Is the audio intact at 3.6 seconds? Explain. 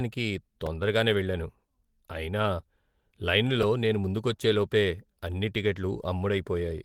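No, there's a repeated buffer at 3.63 s. New audio didn't reach the device in time, so it replayed the last chunk it had, a tiny block about 1.5 ms long (which fits a 64-sample buffer), four extra times in a row. With a block that short, the repeats don't come across as a stutter. You get a quick click or brief buzz from the hard joins, and roughly 5 ms of real audio never gets played.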